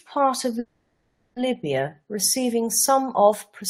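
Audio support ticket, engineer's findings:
Call audio freeze at 0.59–1.39 s, right after "part of": the last sound stretches into a fading buzz for about 0.77 s, then speech resumes where it left off, nothing lost, just pushed later. Likely jitter buffer underrun from packets held up in transit.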